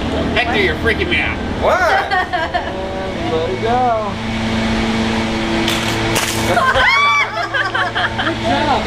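From 5.29 to 7.71 s a train of clicks, about fifteen similar pops at an uneven 5.8 per second, ticks about 5 dB above the sound, likely interference; crackle would be denser and more random.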